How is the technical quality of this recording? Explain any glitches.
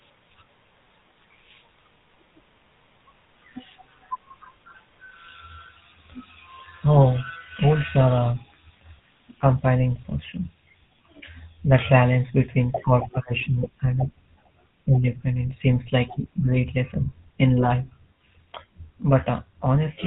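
The technical quality is poor throughout, because the whole recording passes through one codec. From start to finish the speech sounds buzzy, gravelly and band-limited, the plainly audible mark of the GSM full-rate codec. It models the vocal tract, drives it with sparse regular pulses, and cuts everything above 4 kHz, a sound that fits a 13 kbps phone link.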